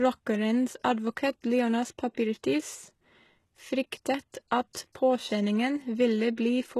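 The whole speech track has that gritty, metallic treble and nothing above 12.3 kHz, likely HE-AAC compression at a very low bitrate, around 16 kbps. At 2.14 to 2.17 s, then 4.32 s, 4.73 s and 4.93 to 4.95 s, there's pre-echo: a brief hiss smeared just ahead of sharp attacks, lasting 17 to 29 ms.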